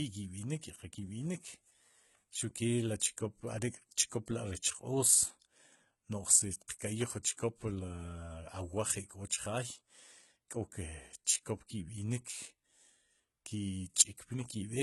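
A speech recording whose treble sounds gritty and lispy on s sounds, with nothing above 11.8 kHz, the synthetic top of likely HE-AAC compression at around 16 kbps, unlike a plain dull low-pass. Short hiss smears just ahead of two sharp attacks, at 6.79 and 7.23 s, each spreading about 15 ms early: pre-echo, which comes before the attack rather than trailing it like reverb.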